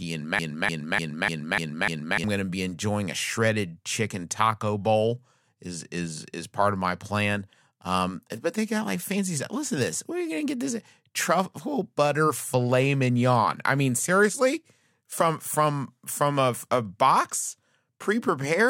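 From 0.39 s to 2.24 s a broken-record loop repeats one 0.30 s fragment six times, likely from a stalled player or stream resending its last buffer. The audio due there is lost before "going to be enjoying". The waveform and spectrogram show identical blocks at exact 0.30 s spacing.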